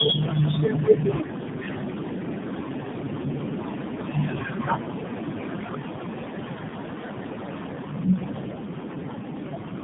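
Tandem speech coding runs from start to finish of this speech clip. Along the way the signal was decoded and re-encoded repeatedly, passing through three separate speech codecs: iLBC at 13.33 kbit/s, AMR-NB at 12.2 kbit/s and finally AMR-NB at 7.95 kbit/s, with G.711 links in between. Each coder compounds the previous one's damage, so the voice sounds rough, muffled and warbly, with nothing above 3.8 kHz.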